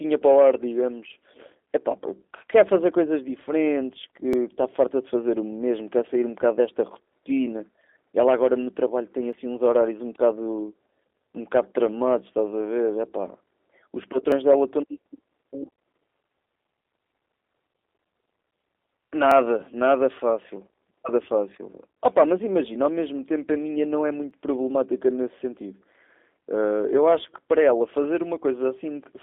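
G.729 codec damage runs through the whole speech recording. The sound has the slightly rough, synthetic quality of a low-rate coder that rebuilds each short frame from a vocal tract model, a pitch predictor and a few pulses, which fits 8 kbit/s G.729A. Nothing reaches above 3.8 kHz, and the band sits roughly between 300 Hz and 3.6 kHz, so sibilants are dulled and the low end is thin.

Audio missing between chunks shows up as five brief skips, at 4.33, 9.33, 14.32, 19.31 and 24.31 s, recurring every 5 s. Each is a tiny jump of a few milliseconds, where the sound on either side is butted together with no gap. The steady spacing likely comes from a recorder or processor handling the audio in 5 s blocks and dropping a sliver at each handover.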